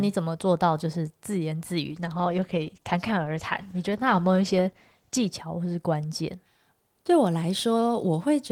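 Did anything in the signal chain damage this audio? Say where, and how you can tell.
Yes. A call bitrate drop at the codec stage, triggered by a lower network bandwidth estimate, runs from 1.86 to 5.37 s. The speech turns coarse and watery, which fits an encoder squeezed from about 32 to 13 kbps. On a spectrogram, the upper bands thin and smear until recovery.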